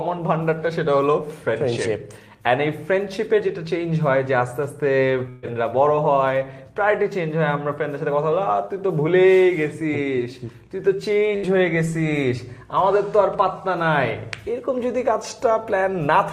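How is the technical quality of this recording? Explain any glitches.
Two short dropouts break the continuity of the audio. At 5.29 to 5.46 s and again at 11.36 to 11.46 s, the sound freezes briefly and fades, then jumps ahead. Each is a burst of packet loss: the receiver kept extending the last sound, for 132 ms and 69 ms respectively, while turning it down. When playback resumed, about 120 ms and 60 ms of the original audio were simply gone.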